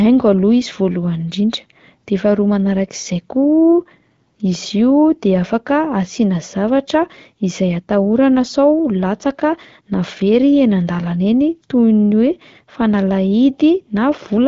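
No technical faults are audible.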